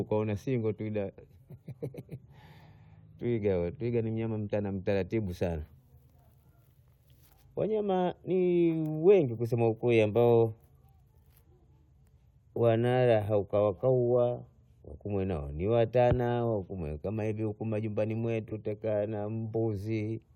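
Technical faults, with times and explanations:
18.49–18.53 s, corrupt frame concealed: after "hatanatana wakumwena hivi majumbani", a 38 ms span, fitting one damaged frame the decoder covered, before "tutakaa na".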